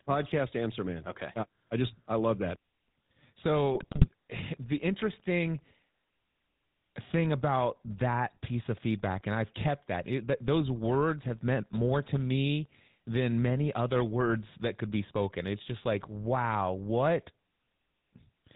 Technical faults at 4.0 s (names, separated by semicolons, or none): GSM full-rate codec; GSM bit errors